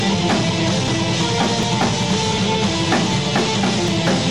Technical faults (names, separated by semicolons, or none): audio missing between chunks